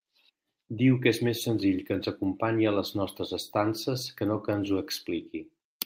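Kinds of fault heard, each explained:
No technical faults are audible anywhere in the speech.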